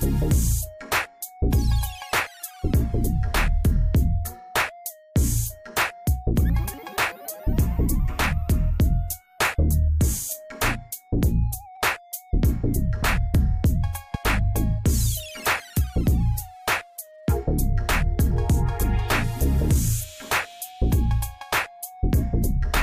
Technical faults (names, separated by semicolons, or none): loud pop